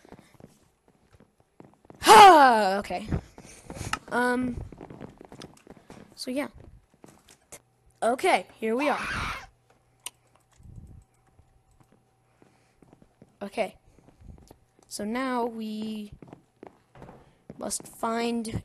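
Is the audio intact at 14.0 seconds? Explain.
Yes, at 14.0 seconds the audio plays through cleanly with no dropout, click, distortion or other break in the signal.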